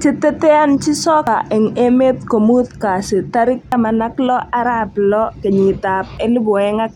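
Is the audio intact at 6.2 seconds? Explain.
No. At 6.18 s, audio missing between chunks: processing in 2.5 s chunks likely dropped about 50 ms at a boundary, heard as an abrupt skip.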